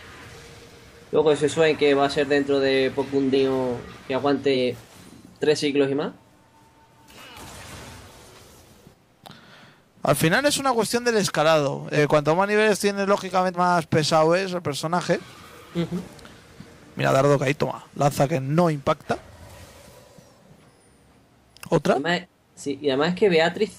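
The audio has compressed frames skipped at four points: 3.32–3.35 s, 4.53–4.55 s, 11.96–11.98 s and 13.54–13.57 s. Each is a point where the material jumps forward. The frames are about 46.4 ms long, so the gaps run from roughly two to five frames, around 100 to 200 ms of lost audio. The frames were missing or rejected as damaged by the decoder.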